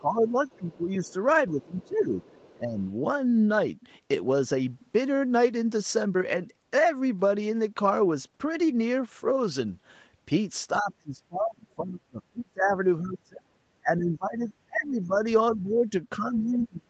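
A speech recording from a call, band-limited at 8 kHz by the Opus path, has two faults. Speech suppressed in double talk hits 0.00–1.14 s, 1.51–2.20 s, 2.54–2.79 s, 10.81–15.25 s and 15.56 s to the end. The voice sinks by roughly 10 to 30 dB, deepest in the long stretch. The echo canceller likely pulled the talker down along with the far-end echo. The other side's voice leaking through appears faintly at 0.48–1.13 s, 1.62–2.82 s and 14.84–15.19 s. It sits around 30 dB below the speech. Likely cause: the echo canceller leaving loudspeaker residue in the microphone signal.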